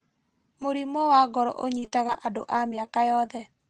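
Just after "wa ngoro", from 1.76 to 3.42 s, repeated packet loss gives the speech a choppy, robotic quality: about a dozen short gaps, the longest 28 ms, are patched by stretching the preceding sound, rebuilding roughly a fifth of a second across the call path's band-limited audio.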